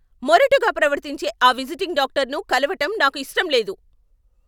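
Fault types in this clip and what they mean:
Nothing to flag here: I can't hear any technical fault anywhere in this speech recording.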